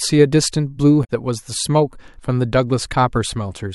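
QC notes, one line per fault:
1.01 to 1.10 s, damaged data in a compressed stream: a short squawky blip cuts into the speech here. A patch of the compressed stream is corrupt, so the decoder misreads those frames, loses sync and hunts for the next valid frame header before picking the sound back up.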